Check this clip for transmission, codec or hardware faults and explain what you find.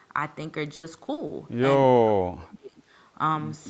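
Two faults stand out in this speech clip: a burst of repeated packet loss early on and a later stretch where the talker is pushed down.

From 0.75 to 1.31 s there is repeated packet loss with a robotic sound. Four holes open in quick succession, the longest about 80 ms. Each is patched by stretching the previous sound, so nearly a third of the span is synthetic. It sounds choppy, with pieces missing.

From 2.01 to 2.83 s the talker drops sharply, by roughly 35 dB at the deepest, for most of that stretch. This is likely speech suppressed in double talk. The echo canceller mistook overlapping speech for loudspeaker echo and attenuated it.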